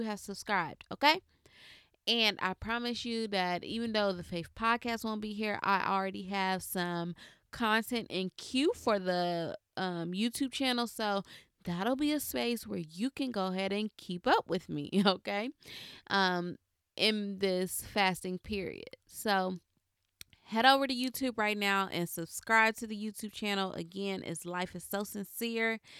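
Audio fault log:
No faults heard in this recording.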